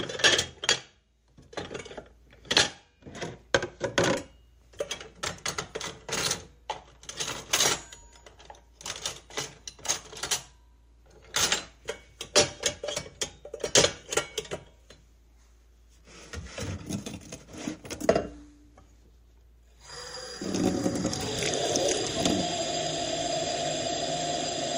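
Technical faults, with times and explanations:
16.23 s and 18.08 s, dropped buffer (overrun): each moment has an abrupt jump forward in the sound and no gap of silence. Roughly 20 ms and then about 10 ms go missing, likely because samples weren't collected before the hardware overwrote them.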